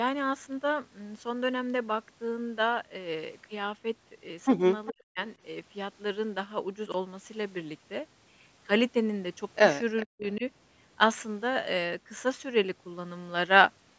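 Speech, carrying three kinds of fault. An echo leak appears at 4.86 to 4.92 s and 9.97 to 10.03 s: a faint copy delayed 404 ms, about 20 and 25 dB down, likely from an echo canceller missing loudspeaker pickup. Speech suppressed in double talk follows, 4.89 to 5.18 s and 10.05 to 10.43 s. The voice dips by up to roughly 40 dB, likely because the canceller ducked both talkers. Chunks out of order cause a jumbled moment at 6.86 to 6.94 s, which fits a 20 ms chunk played about three chunks late.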